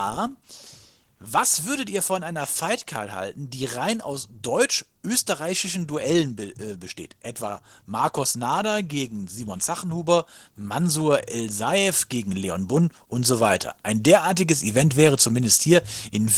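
Opus voice compression runs through the whole speech clip, and the damage is plainly audible: a hoarse, slightly robotic texture from coarsely coded excitation, with a CELT layer coding the band above 8 kHz, which fits a low bitrate near 16 kbps.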